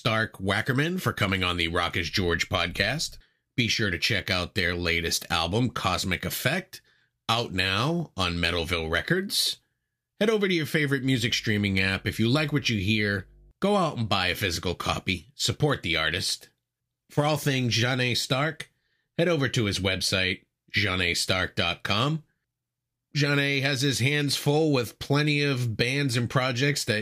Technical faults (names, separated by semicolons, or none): mains hum